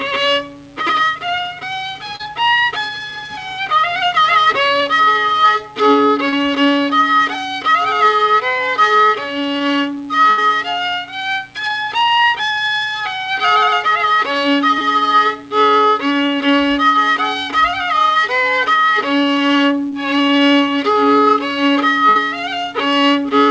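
Audio packets went missing on the call path six times, and the receiver covered each hole by extending the last sound it had, on a line whose band stops at 8 kHz, which fits G.722 at 64 kbps. The four shortest are short concealed packet loss, at 2.16, 6.29, 14.78 and 19.90 s, where roughly 40, 40, 20 and 20 ms of audio failed to arrive in time. The decoder patched each with a continuation of what came before, then blended back into the real signal, so each spot is heard as a tiny smear or wobble and the brief detail inside it is gone. Twice the loss is longer, a burst of packet loss: about 80 ms at 10.30 s and about 60 ms at 22.09 s. There several consecutive packets were lost or came too late, so the receiver had to keep extrapolating while fading the result down. Voiced material turns into a short held buzz, anything noisier into a dying hiss, and the audio then picks up further along with that stretch simply missing.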